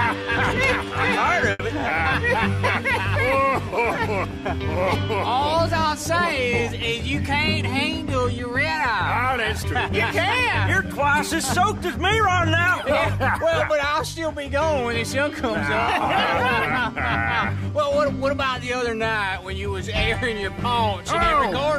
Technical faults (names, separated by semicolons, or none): short stall from a late packet; jitter buffer speed-up